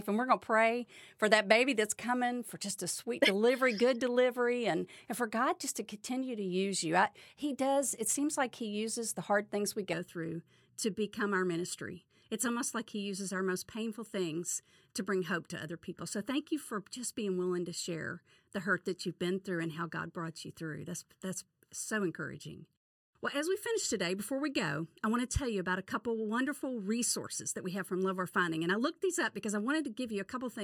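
From 9.9 s, just after "the hard things we", to the end, channel delay causes comb filtering: one channel lags by about 0.7 ms, so the mono sum cancels at evenly spaced frequencies from around 700 Hz, making the speech hollow and phasey.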